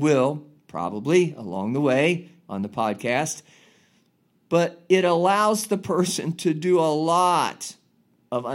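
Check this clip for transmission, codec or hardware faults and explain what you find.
One fault turns up: a bit error spike at 5.99 s. A flipped bit pushes two adjacent samples far off by a power of two before they snap back, peaking around -34 dBFS. The result is a single, broadband tick with no relation to the speech around it. Unlike a dropout click, no audio goes missing, and unlike clipping, it doesn't follow loud passages.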